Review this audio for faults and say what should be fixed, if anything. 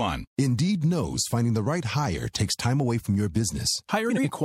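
No faults can be heard in this speech recording. Nothing needs to be fixed.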